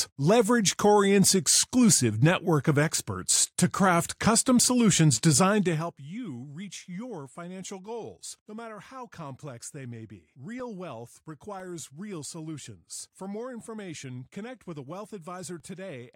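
Periodic USB or driver dropouts from 10.6 s to 15.6 s: once each second, something stalls the audio path, cutting a gap of about two milliseconds to silence and leaving regular ticks in the speech.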